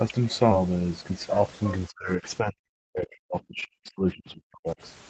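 At 0.51 to 0.53 s there is a skip ahead. Audio that was already queued was discarded, most plausibly by the jitter buffer shedding a backlog, so playback jumps forward with no fill inserted. Roughly 0.4 s of speech is missing, and the two sides of the cut are spliced almost directly. The listener hears an abrupt lurch in the flow rather than a silence, and the playout delay shortens by about the same amount.

From 1.88 s to 4.77 s the speech repeatedly dips and drops out in pieces, adding up to about two seconds of affected sound. At its deepest the level falls by about 40 dB, enough to make fragments vanish entirely. This is likely speech suppressed in double talk: with both ends active, the echo canceller could not distinguish the near talker from loudspeaker echo and attenuated everything. The band limit near 8 kHz heard throughout fits a wideband Opus call stream.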